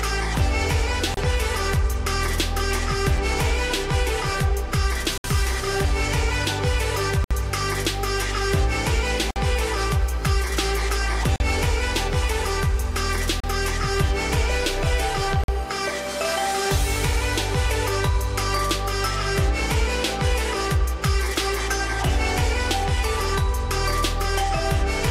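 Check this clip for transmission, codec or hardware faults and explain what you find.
One transmission fault recurs: a gap between stream segments, at 1.14, 3.17, 5.18, 7.24, 9.31, 11.36, 13.40 and 15.44 s. The spacing fits 2-second segments whose timestamps leave a small hole at each boundary, which the player fills with silence. Each is a hard-edged dropout of 3.5 to 66 ms, longest near 5.2 and 7.2 s. Nothing is discarded. Each hole only pushes the following audio later.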